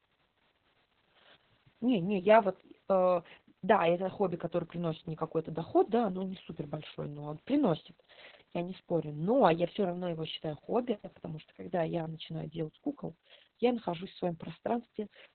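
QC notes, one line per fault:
Throughout, Opus voice compression: the speech is muffled, hoarse and a little robotic, with nothing above about 4.4 kHz, so it's stuck in narrowband. The sound points to a very low bitrate, around 6 kbps, where Opus drops to its SILK speech coder alone, throws away the upper band and describes the excitation only coarsely. That coarse excitation is what gives the voice its buzzy, rough edge, and it is coded in long 60 ms frames.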